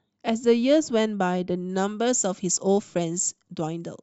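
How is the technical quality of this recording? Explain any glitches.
The recording has one clear fault. From 1.69 s to the end of the clip, pre-emphasis is left on. The speech carries a treble boost that matches the FM 75 µs curve, and the complementary de-emphasis was never applied on playback. Content at 10 kHz therefore sits about 14 dB higher relative to 1 kHz than it should. From that point the speech turns thin and glassy, and sibilants become sharp and hissy.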